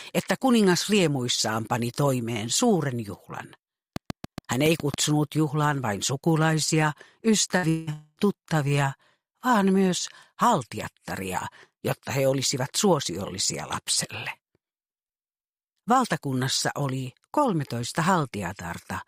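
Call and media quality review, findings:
Train of clicks, 3.96–4.95 s: regular ticking at about 7 per second, roughly seven clicks, peaks about 10 dB above the sound. Near-identical pulse shape points to likely electrical interference or a faulty connection or power supply injecting periodic impulses.

Burst of packet loss, 7.57–7.66 s: short held, decaying tail, about 55 ms of concealment, then the audio jumps ahead with about 60 ms missing. Consecutive packets were lost or arrived late, and the receiver extended the last frame while fading it down.

Long network dropout, 7.69–7.90 s: a fading buzz or hiss for about 180 ms with no true silence, and about 180 ms of the sound is gone on resume. This is likely a stall in the network path, with the concealment covering the whole gap.

Long network dropout, 7.93–8.20 s: another fading fill of about 237 ms, with about 20 ms of silence at its end and about 240 ms lost. 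It has the same likely network stall mechanism, and the concealment ran out just before the audio came back.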